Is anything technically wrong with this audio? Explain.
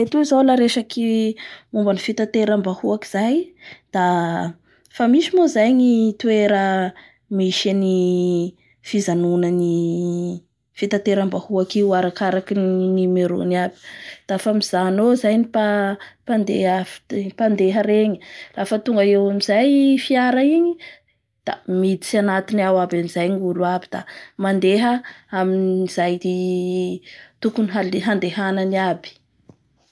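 No, nothing is technically wrong with this audio.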